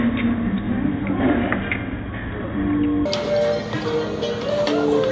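From 3.06 s to the end, a wrong sample rate fault plays the sound at twice its intended speed and a full octave higher, consistent with 8 kHz material played back at 16 kHz. On a spectrogram, features shift upward by a factor of two and shrink in duration. The waveform shows events squeezed to half length.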